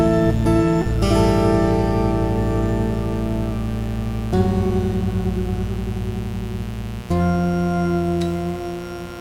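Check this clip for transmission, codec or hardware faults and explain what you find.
One hardware fault is present: mains buzz runs through the whole music clip, from start to finish. Interference from a dimmer, rectifier or poor shielding injects sharp spikes twice per 60 Hz cycle, spreading harmonics up to several kHz. It sounds like a steady, raspy buzz sitting around 20 dB below the music.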